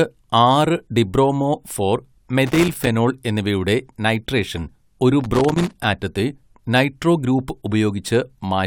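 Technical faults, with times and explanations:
2.47–2.87 s and 5.21–5.84 s, loose connector crackle: right after "ഡിബ്രോമോ ഫോർ" and again after "എന്നിവയുടെ നൈട്രേഷൻ ഒരു", the speech breaks into irregular scratchy crackle for about 0.4 s and then about 0.6 s. A worn or dirty contact keeps making and breaking, chopping the signal.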